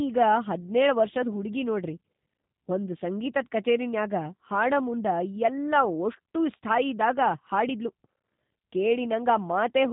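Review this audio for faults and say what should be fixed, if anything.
The whole clip carries G.729 codec damage: speech is band-limited below 4 kHz, slightly rough and synthetic, consistent with an 8 kbit/s G.729A model-based coder. Capture or route it through a wideband codec like Opus instead.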